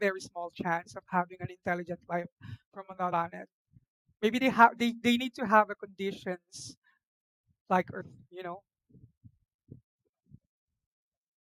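Compressed frames skipped at 3.12, 4.40 and 8.00 s: missing or rejected frames make the speech jump ahead by about a fifth of a second, one short frame, then roughly 150 ms.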